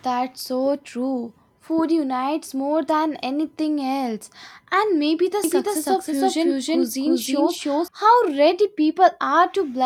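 Speech clip with a doubled audio track from 5.44 to 7.88 s, just after "maybe the": an equally loud copy trails by roughly 300 ms, likely a second capture path running late.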